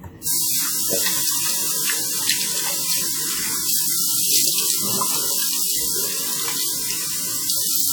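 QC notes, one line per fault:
Throughout: WMA compression. The whole thing has a ringing, washy quality, with a hiss that swells and fades along with the sound itself. That's likely a transform codec working on long blocks, so its quantisation noise smears over tens of milliseconds around each event, and quieter spectral detail gets dropped outright. The damage is plainly audible, which fits a bitrate around 48 kbps, and there's nothing left above about 19.7 kHz.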